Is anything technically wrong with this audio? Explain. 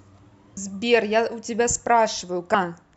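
Yes. At about 0.56 s the speech has a brief glitch from damaged data in a compressed stream. Part of the encoded file is wrong there. The decoder misreads that frame, loses sync and hunts for the next valid header, producing a short, sharp blip.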